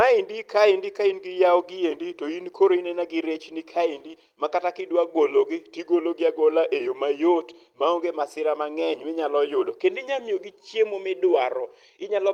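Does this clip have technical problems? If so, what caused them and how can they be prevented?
Yes. There's clock drift between sender and receiver throughout: the sender's clock runs a few percent fast, so the receiver's jitter buffer keeps overfilling and has to shed audio. You'd prevent it with adaptive resampling at the receiver that tracks the sender's rate.

The result is repeated timing corrections from 0.09 s to 12.18 s, where small pieces get cut out to keep pace, leaving the audio running at about 103% with slight, unevenly spaced hiccups. Smooth time-stretching instead of hard cuts would hide these.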